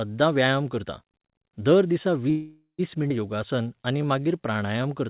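Speech carried over a narrowband call path, with nothing above 4 kHz, which fits G.711 mu-law coding. Right after "दर दिसा", at 2.3 to 2.81 s, there is a call audio freeze, likely from packets held up in transit that left the jitter buffer empty. The last sound is stretched into a fading buzz lasting roughly half a second, ending in about 120 ms of silence, and speech then resumes with nothing lost. At 3.09 to 3.12 s the audio skips ahead, jumping past about a fifth of a second of speech with almost no join gap, as discarded audio lets playback catch up. From 3.36 to 4.83 s a jitter buffer slow-down repeats short pitch periods, so speech plays at 88% speed with the same pitch, drawn out by 190 ms in total to rebuild the buffer reserve.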